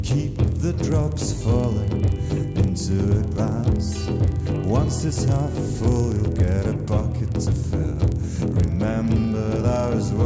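The sample-rate converter was restarted on every block, with each chunk, roughly 40 ms long, resampled in isolation, plausibly a 48 kHz to 16 kHz conversion. At each block edge the filter lacked the real neighbouring samples and produced a small error there. Throughout the clip this lands 25 times a second, giving a low, rough buzz at 25 Hz that rides on the signal and drops away whenever the sound stops.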